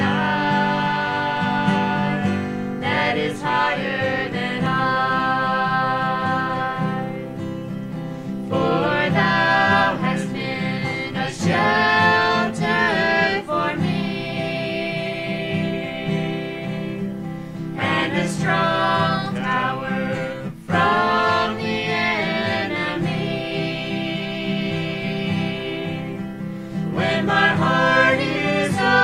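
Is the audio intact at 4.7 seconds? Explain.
No. At 4.66 s there is a dropped buffer (overrun), likely from samples being overwritten before they were read, so about 30 ms of sound vanishes without silence. It is heard as a jump in the sound, and appears as a waveform discontinuity and a thin vertical broadband line on a spectrogram.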